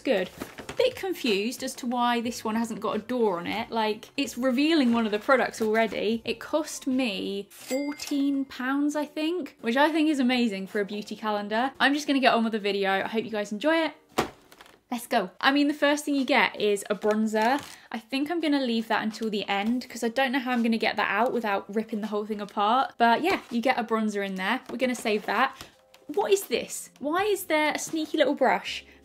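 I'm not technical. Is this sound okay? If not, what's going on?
Yes, the sound is okay, and nothing is going wrong with it.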